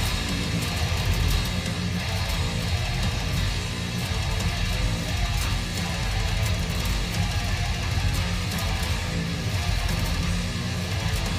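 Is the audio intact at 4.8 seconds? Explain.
Yes, at 4.8 seconds the audio plays through cleanly, with no dropout, click, distortion or other fault at that moment.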